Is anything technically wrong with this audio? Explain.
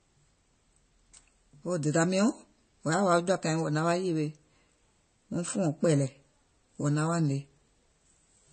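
Yes. Throughout, the speech sounds dull and swirly, with nothing above about 8.3 kHz. This points to low-bitrate audio saved at a high bitrate: a low-bitrate MP3 whose cut-off and smearing were likely carried into a much larger re-encode that cannot restore them.

At 6.07 s, a single sharp snap sits on top of the speech. This is an electrical switching spike, likely a nearby switch or static discharge arcing briefly and coupling a short burst of energy into the audio line.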